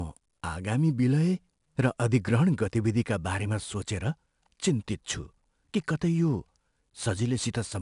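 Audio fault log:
throughout, 4-bit ADPCM compression: a plainly audible gritty hiss clings to the speech and swells with every loud syllable, with nothing above 10.6 kHz, so the top end sounds dull. Each sample is coded as a coarse 4-bit step from a predicted value, with the step size adapting as it goes. The rounding error becomes broadband noise that tracks the signal's level, and the data rate fits about 89 kbps.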